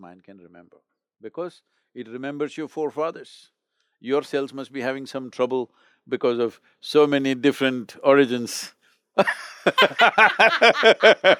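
From 3.87 s to 9.32 s the automatic gain is rising, creeping up about 8 dB, so the speech and background swell together as it compensates for quiet input.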